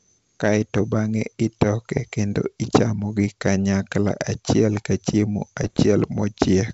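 At 1.97 to 2.03 s and 5.63 to 5.85 s, bit errors on an ADPCM link, a few per thousand bits, throw the decoder's step size and predictor off, so pops and gritty bursts ring on briefly. The waveform shows spiky level jumps, and the spectrogram shows broadband vertical smears.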